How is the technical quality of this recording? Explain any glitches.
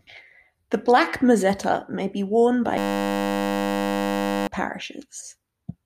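The recording has one serious glitch, a system hang loop from 2.78 to 4.47 s, right after "mozzetta may be worn". The computer or its audio driver stalled while the sound hardware kept replaying the same small stretch of its ring buffer, a 10 ms slice repeated well over a hundred times. Because the looped piece is so short, it comes out as a steady 100 Hz buzz in place of the speech, and about a second and a half of audio is lost.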